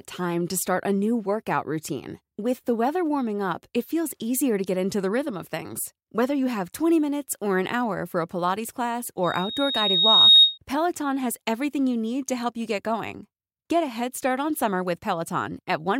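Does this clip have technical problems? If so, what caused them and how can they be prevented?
Yes. A loudspeaker feedback squeal, 9.23 to 10.58 s: the microphone hears its own loudspeaker, loop gain at 3.7 kHz exceeds one, and that tone swells within about a second to roughly 15 dB above speech. Move the microphone away from the loudspeaker or lower the gain.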